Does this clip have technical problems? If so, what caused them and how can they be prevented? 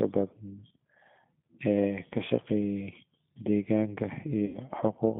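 Yes. The whole clip goes through the G.729 codec at 8 kbit/s, squeezing the speech into a narrow line band of about 150 Hz to 3.5 kHz. Unlike simple low-pass filtering, which only muffles, the rebuilt voice also sounds rough and slightly synthetic. Using a wideband codec such as G.722 or Opus on the call path would prevent it.

From 4.46 to 4.59 s there is VoIP packet loss concealed by the speech codec. About 80 ms of audio went missing, which fits four lost 20 ms packets. The decoder stretched its last pitch and filter into a fading buzz or coloured noise, and the voice stays weak or distorted just after packets return. A plain dropout would leave silence or a click instead. A jitter buffer, forward error correction or network quality-of-service settings would prevent it.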